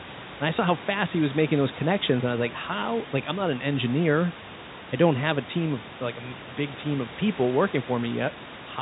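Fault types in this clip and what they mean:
No technical fault can be heard anywhere in the speech. Room noise sits about 17 dB below the speech, and the telephone coding limits the sound to the band below 4 kHz.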